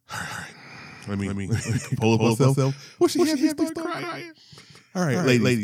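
From start to finish the speech is a doubled audio track: a second, full-band copy runs about a fifth of a second behind and at roughly the same level, with no decay or room colour. Each syllable is likely captured twice by a slower path. On a waveform every burst repeats as a twin of equal height; a spectrogram shows each onset and formant pattern printed again, shifted right by the same fixed gap throughout.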